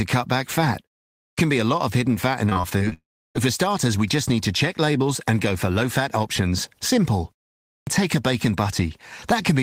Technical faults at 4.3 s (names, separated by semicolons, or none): none